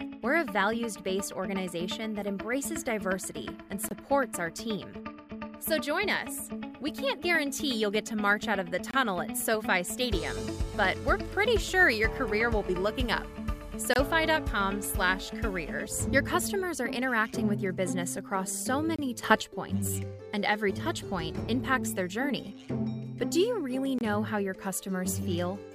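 A gap between chunks opens at 3.89, 8.91, 13.94, 18.96 and 23.99 s: hard-edged 25 ms holes every 5 s that interrupt the sound without losing any, unlike random dropouts. From 19.23 to 19.42 s a sudden gain jump of about 9 dB lifts sound and background together instantly, likely an unramped digital gain change rather than a gradual fade.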